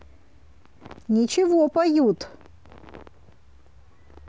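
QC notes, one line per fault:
No fault found in this speech clip.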